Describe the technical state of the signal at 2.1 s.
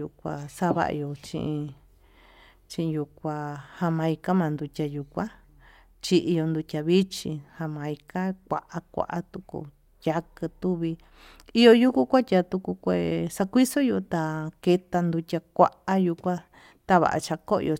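At 2.1 s the speech signal is intact, with no technical fault present at that moment.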